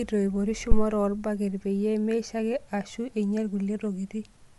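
From start to finish the speech carries plainly audible coding damage. Nothing reaches above 11.5 kHz. The upper band sounds grainy and breathy, with noise standing in where detail should be. This is likely Bluetooth LC3 compression. That transform codec works in short frames, here consistent with 10 ms. At a tight bit budget it drops upper spectral content and fills the gaps with noise. The degree of damage points to a bitrate around 48 kbps.

At 0.72 s a phantom power thump breaks in and lasts until 0.89 s. It is a deep, low thud, not part of the speech. A supply was switched on or off on a live input. The sudden voltage step passed through the coupling capacitors into the signal path. The thump falls away quickly, with a decay of about 38 ms.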